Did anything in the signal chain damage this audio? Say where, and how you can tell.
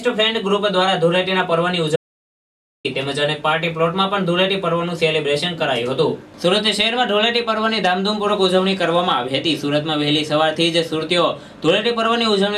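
Yes. An audio dropout to silence, most likely a lost input link or a momentary mute ahead of the recorder, left silence written from 1.96 to 2.85 s. The sound stops dead and returns abruptly, and the 885 ms gap holds true silence with no room tone.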